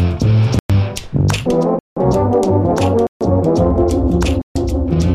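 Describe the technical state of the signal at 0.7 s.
At 0.7 s the signal is just coming out of a block of digital silence. The dropout runs from 0.59 s to 0.70 s, about 107 ms. For that span the sound drops to silence. The output buffer was not filled in time, or the processing produced invalid values that were zeroed. The sound cuts off and returns with no fade. At this length it is heard as a short hole in the sound.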